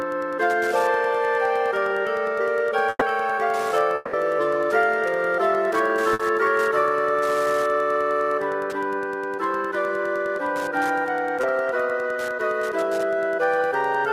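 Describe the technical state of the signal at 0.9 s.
At 0.9 s, Wi-Fi interference, present throughout, adds rectified 102.4 ms beacon ticks about 25 dB below the signal, showing as evenly spaced vertical broadband stripes on a spectrogram.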